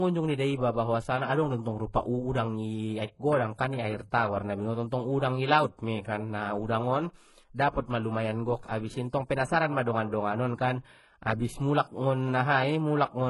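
Throughout the speech, two kinds of codec damage are heard together. One is the thin, swirly smearing of a very low-rate HE-AAC encode. Over it sits the grainy, warbling texture of MP3. Nothing is heard above 11.5 kHz. This is likely transcoding between lossy codecs. The MP3 stage spent its bits copying the earlier artefacts and then added its own. The sound fits 12 kbit/s HE-AAC followed by 48 kbit/s MP3.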